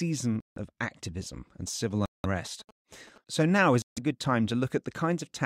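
A speech clip with three dropouts whose likely cause is a Bluetooth stall, where delayed packets drained the headphone buffer: playback falls silent for about 160 ms at 0.40 to 0.58 s, just before "of activism and", about 180 ms at 2.06 to 2.26 s, and about 150 ms at 3.82 to 3.98 s, just before "a good time". From 1.67 to 3.65 s, between "of activism and" and "is a good time", GSM signalling bursts from a nearby 2G phone are rectified by the audio circuit, adding a galloping ticking buzz at 217 Hz roughly 25 dB below the speech.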